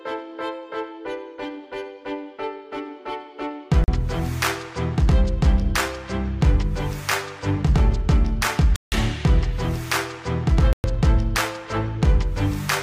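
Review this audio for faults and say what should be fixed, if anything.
Three blocks of digital silence: 3.84 s (a 40 ms gap), 8.76 to 8.92 s (a 160 ms hole) and 10.73 to 10.84 s (about 110 ms), each cutting out abruptly with no fade. Give the audio thread enough buffer headroom that the output is always filled in time.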